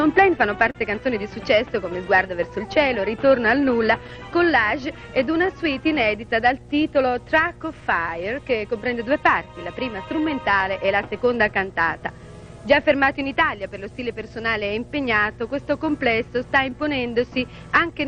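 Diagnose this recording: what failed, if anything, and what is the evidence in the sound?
Ground loop in the analogue wiring: a current loop or nearby transformer is coupling the 60 Hz power line into the signal path. The result is a steady low hum with some low harmonics under the whole recording, sitting roughly 20 dB below the programme level.

Clock drift between sender and receiver, a network and jitter-buffer problem: the sender's audio clock runs about 3 percent slow relative to the receiver's. The buffer keeps draining, so the receiver must keep stretching the audio, and small timing hiccups recur throughout at uneven intervals.

Scattered short gaps from packet loss on the network: roughly four small holes between 0.03 and 2.08 s, the longest around 40 ms, then about three more between 4.07 and 7.14 s, the longest around 10 ms. The receiver patched each by extending the preceding sound, leaving brief ticks and smears.

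Repeated timing corrections in the receive buffer, driven by that slow sender clock: from 0.08 to 17.92 s the receiver keeps inserting short repeated pieces, playing at an effective 98 percent speed and adding around 0.4 s overall. This is heard as an unsteady, faintly hesitant tempo.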